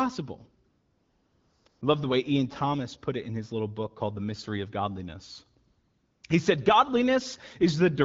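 The background drops into a steady, smooth hiss from 0.69 to 1.65 s, briefly returns, then does so again from 1.69 to 1.81 s, just before "I love the way", and once more from 5.67 to 6.23 s. This is AMR comfort noise: the phone judged the talker silent, stopped sending speech frames, and the receiving end synthesised noise from a rough level-and-spectrum sketch, so the real ambience switches out. The wideband speech itself sounds clear.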